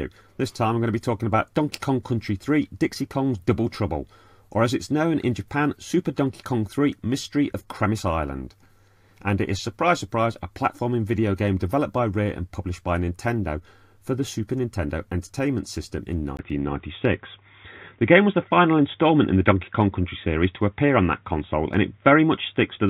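From 16.37 s, after a 20 ms gap, the sound turns dull and boxy with nothing above 3.8 kHz, likely an input switched to a poorer device.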